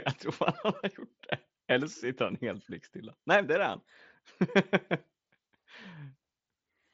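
No faults in this speech; the only audible mark of the Bluetooth mSBC headset path is a top end that stops near 7.7 kHz with light codec grain.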